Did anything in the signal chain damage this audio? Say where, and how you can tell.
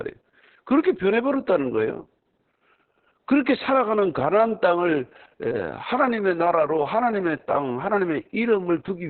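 Yes. The damage happened at the codec stage and runs through the whole clip. This is Opus voice compression in its SILK linear-prediction mode at a very low rate, consistent with roughly 6 kbps. The speech is cut to narrowband, with almost nothing above 4 kHz, so it sounds muffled. Because the excitation is coded so coarsely, the voicing comes out hoarse and slightly robotic, which points to heavy codec damage rather than a playback or wiring problem.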